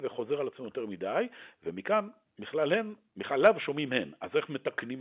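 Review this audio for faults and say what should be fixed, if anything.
Nothing in the recording needs fixing. The speech carries the sound of G.711 telephone coding in its A-law form, with nothing above 4 kHz and a faint hiss that rises and falls with the level.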